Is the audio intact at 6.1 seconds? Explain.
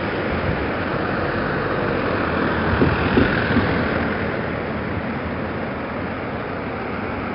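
No. At 6.1 seconds, as across the whole clip, the audio carries heavy 4-bit ADPCM compression damage. Each sample is coded as a small step from a prediction, so the error rides along as gritty hiss that swells with every loud sound and roughens sharp attacks. Nothing survives above 5.3 kHz, which fits a low sample rate and a rate around 44 kbps. Unlike transform codecs, there is no swirling or warbling, only level-following grit.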